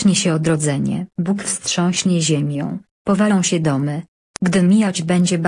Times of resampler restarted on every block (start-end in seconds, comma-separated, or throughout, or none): 2.40-5.47